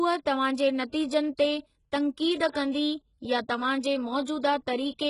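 Throughout, likely HE-AAC compression, fitting about 12 kbps, rebuilds treble from copied lower bands, so s sounds turn heavily gritty and lispy, with nothing above 11.1 kHz.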